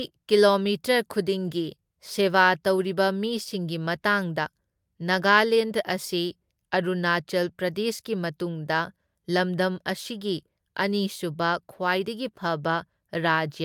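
Nothing stood out as a technical fault on listening to this speech recording.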